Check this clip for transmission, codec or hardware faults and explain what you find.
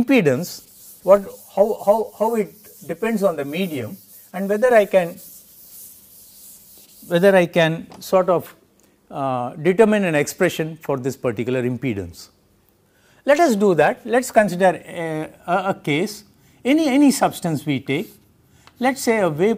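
One fault is audible: channel delay (comb filtering), from 1.17 s to 4.71 s. One channel arrives late by roughly 10 ms, and when the two are summed to mono, the shared content cancels at evenly spaced frequencies. The first notch falls around 50 Hz, with further notches repeating about every 100 Hz above it. The sound turns hollow and phasey for that stretch. A spectrogram shows fixed horizontal dark stripes stacked at regular intervals.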